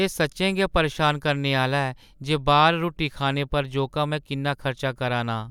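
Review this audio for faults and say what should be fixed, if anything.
Nothing stood out on listening, so there is nothing here to fix.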